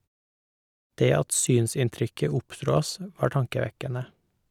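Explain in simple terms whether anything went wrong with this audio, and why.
Nothing went wrong here: the speech signal comes through intact, with no technical faults anywhere in the recording.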